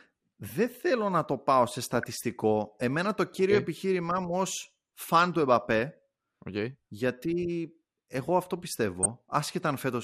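Throughout, the speech is dull and granular, with a gurgling edge and upper bands flickering in and out. This is likely MP2 compression at a rate around 80 kbps: too few bits to keep every sub-band running, so the highest are dropped and the remainder coarsely quantised.

DAB burbling appears at 1.95 to 2.04 s, after "να το πάω σε", and again at 9.03 to 9.10 s, after "εγώ αυτό". Each is a brief burbling as bit errors, at roughly a third of a percent, corrupt samples, putting short blips of noise into single sub-bands.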